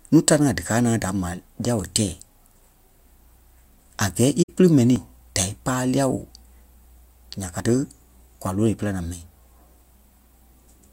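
From 4.42 to 4.50 s the speech fades out and back in around a hole of about 64 ms, which fits roughly three lost frames. This is AAC frame loss with muting: the decoder zeroed the missing spectra, and overlapping windows soften the edges.

At 4.96 s and again at 7.6 s there is a small jump forward in the speech and no gap of silence. The likely cause is a dropped buffer (overrun), with about 20 ms discarded before the audio was read.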